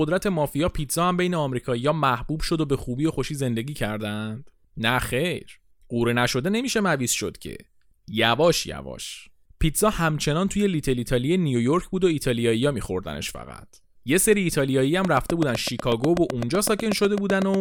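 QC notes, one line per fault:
15.05–17.55 s, train of clicks: a regular run of about twenty near-identical pulses at 8 per second sits on top of the speech, peaking well above the speech level and audible as steady ticking, likely from interference by nearby equipment or a faulty connection or power supply.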